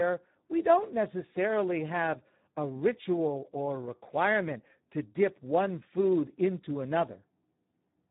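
From start to end the speech carries heavy Speex codec damage. The sound points to a low-rate narrowband setting, around 8 kbps, where the CELP coder has very few bits left to model the excitation signal. Each segment comes out hoarse and grainy as the residual is reduced to a coarse approximation. Nothing survives above 3.8 kHz, so the speech is dull and telephone-like, lacking crisp consonant detail.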